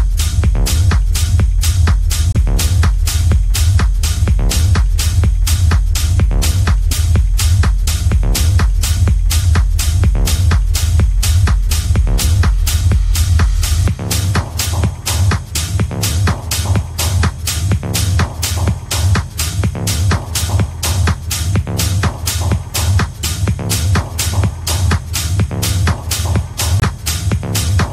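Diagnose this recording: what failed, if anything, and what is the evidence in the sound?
At the codec stage, compressed frames arrived with flipped bits, the decoder rejected them, and the player filled the gaps with silence: corrupt frame muted. The audio drops to dead silence abruptly at 2.33 s for about 38 ms, then again at 26.80 s for about 42 ms. The first gap fits one lost frame and the second points to two. Timing is preserved, so the sound resumes on schedule after each hole.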